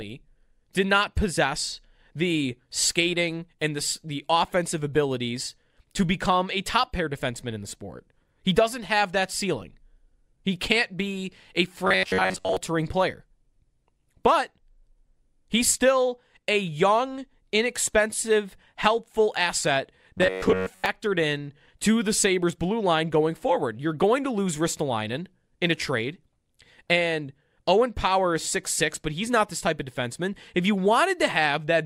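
Speech, where audio likely arrived too seldom and the software filled the gaps by looping a roughly 10.7 ms buffer, skipping most of the real signal: robotic sound from repeated short buffers at 11.85–12.57 s and 20.18–20.86 s, a rigid metallic buzz near 93.8 Hz.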